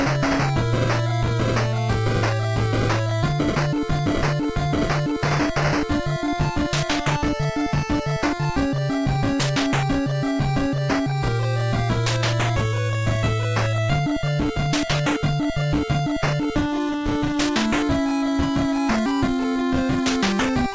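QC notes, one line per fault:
Nothing to flag here; the sound just has the usual character of a wideband call path, with nothing above 8 kHz, which fits a G.722 link.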